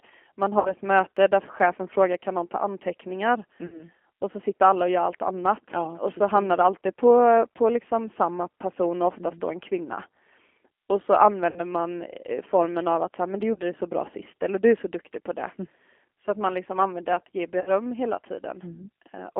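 Speech carried over a G.729 codec at 8 kbit/s, band-limited to roughly 300 Hz to 3.4 kHz, sounds slightly rough and synthetic throughout, because the decoder rebuilds each 10 ms frame from a vocal tract filter, a pitch predictor and a few pulses. VoIP packet loss concealed by the speech codec appears at 0.59–0.74 s, 3.66–3.83 s (between "kan någon ta anteckningar" and "och så sitter alla"), 11.50–11.60 s, 13.53–13.59 s (between "så här men du" and "det så bra sist") and 17.61–17.68 s (after "liksom använder att ge"). Each gap sounds like about 60 ms of lost audio, except the shorter one at 13.53 s, which sounds like about 30 ms. In each, the decoder stretches its last pitch and filter into a fading buzzy tone or coloured noise, and the voice stays weak briefly afterwards.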